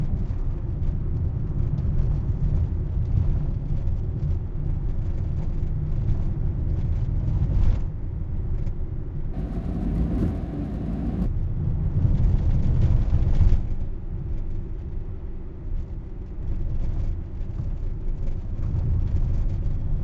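From 9.33 s to 11.26 s the sound has a wrong sample rate fault. The samples play at twice the rate they were captured at, with no conversion between them. Everything runs at double speed. Pitch rises by 12 semitones, a full octave. The passage sounds high, thin and hurried. The doubling fits audio recorded at 16 kHz but played back at 32 kHz. Because speed and pitch shift together, the change is easy to hear.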